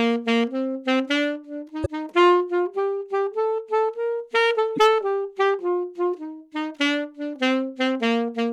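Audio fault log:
1.82–1.86 s and 4.74–4.79 s, damaged data in a compressed stream: two brief glitches, each about 45 ms. Corrupted frames make the decoder misread the data and lose sync.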